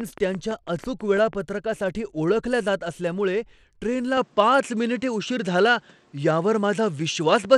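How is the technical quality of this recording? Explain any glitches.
The technical quality is compromised by three faults: codec damage across the whole clip, a burst of clicks at the start, and a drop in bandwidth partway through the speech.

Bluetooth SBC compression runs throughout. The likely cause is the SBC codec at a low bitrate, consistent with about 96 kbps, where coarse sub-band quantisation starves the upper bands. The result is plainly audible: treble that flickers or thins, with a gritty, aliased haze riding on the speech.

A train of clicks runs from 0.01 to 1.34 s. Around ten evenly spaced pulses arrive at about 6 per second, peaking a few dB above the speech. They are likely caused by electrical interference or a struggling interface, and they sound like steady ticking over the voice.

At 4.17 s, right after "ओळखल्या जात असल्यामुळे ट्रेनला", the input likely switched to a poorer device and stays there to the end. 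Nothing is heard above 9.8 kHz, so the speech turns duller with no gap and no level jump, while a faint new noise floor appears about 35 dB down.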